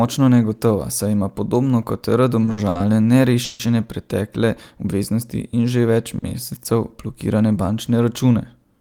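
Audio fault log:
2.45 to 2.79 s, short stalls from a late packet: three in quick succession, at 2.45, 2.51 and 2.69 s. Each time the jitter buffer ran dry, so the last bit of speech gets stretched by 20, 60 and 60 ms, with roughly another 11 ms tacked onto the third. Nothing's lost, but you hear a held, slightly buzzy smear.
3.45 to 3.62 s, call audio freeze: about 150 ms where the speech hangs on a fading, buzzy continuation of the last sound rather than dropping to silence. It's likely packets got held up in transit and the buffer emptied. Once they turn up, it picks up right where it stopped, so it's a pause with nothing missing.
6.18 to 6.24 s, short stall from a late packet: right after "in že več" the sound is held for about 40 ms while the receiver waits on a late packet, then carries on from the same spot. It's a brief drag with a faint dip, with nothing skipped.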